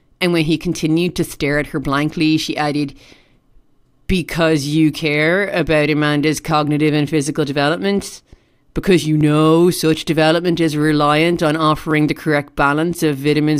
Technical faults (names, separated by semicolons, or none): clock drift buffer slips